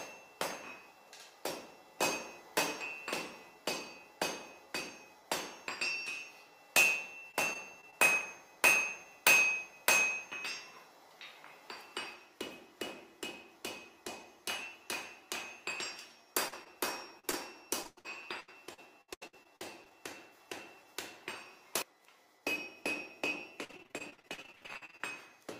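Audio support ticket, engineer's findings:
Repeated packet loss (robotic sound): 7.19–7.94 s, 17.83–19.92 s, 23.64–25.01 s. Jitter buffer/network path. Back-to-back concealment gaps (longest 100 ms, up to about 46% of the last span filled) give choppy runs with pieces missing, not isolated blips.

Short concealed packet loss: 16.48–16.54, 16.64–16.67, 17.19–17.25, 17.31–17.35 s. Decoder concealment of 20–40 ms holes. Single brief smears or wobbles with clean audio between, too sparse to turn robotic.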